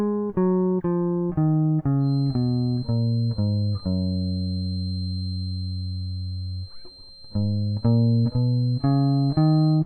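From 1.97 s to the end, a feedback whistle near 4.1 kHz sits roughly 25 dB below the music. It is likely a speaker-to-microphone loop held at the edge of feedback, visible as a thin horizontal spectrogram line.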